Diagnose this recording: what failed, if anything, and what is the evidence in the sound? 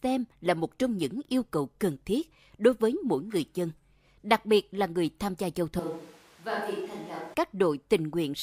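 Right after "người tham gia giao", at 5.79 s, the voice suddenly goes roomy and hollow, thinner in the bass and roughly 10 dB quieter, with the room noise rising to sit only around 25 dB under the speech. At 7.34 s it snaps back just as abruptly. That's the signature of a switch to a distant microphone, most likely the close mic's feed dropping at the analogue wiring stage, leaving a farther pickup to carry the room along with the voice.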